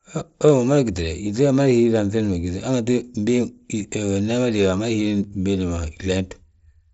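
No technical faults can be heard anywhere in this speech.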